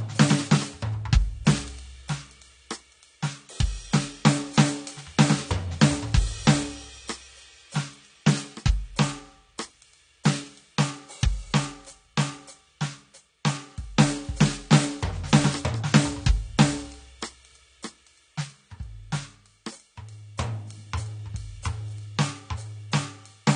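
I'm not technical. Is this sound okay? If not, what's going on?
No. The music was likely squeezed hard by AAC compression, so from start to finish nothing above about 9.7 kHz survives, leaving it dull, smeared and warbly.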